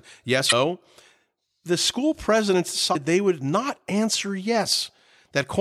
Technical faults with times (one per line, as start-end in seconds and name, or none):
0.48-0.53 damaged data in a compressed stream
2.91-2.96 damaged data in a compressed stream